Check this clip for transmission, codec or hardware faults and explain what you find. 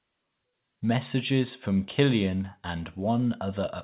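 No transmission, codec or hardware faults.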